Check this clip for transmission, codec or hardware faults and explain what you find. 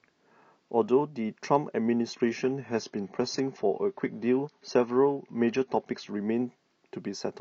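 One transmission fault is present: from 2.13 s to 6.13 s the adaptive stream drops to a lower bitrate. The player switched to a leaner encoding for four seconds, most likely because the connection slowed. The speech loses everything above 7 kHz, sounding duller and smeared, with a codec character consistent with a drop from roughly 96 kbit/s AAC to around 24 kbit/s. Both the switch down and the recovery are abrupt, with no gap in the audio.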